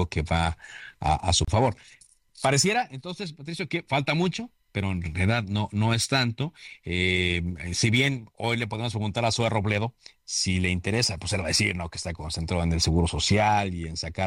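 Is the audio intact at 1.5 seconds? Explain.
No. The speech stops dead for about 31 ms, from 1.45 to 1.48 s, just after "que va a su", then resumes exactly where it left off. The codec smears the gap's edges, so the silent part is shorter. This is a gap at a join of encoded pieces. The audio was encoded in separate segments and joined without trimming, so the encoder's start-up delay and last-frame padding remain as a brief silence.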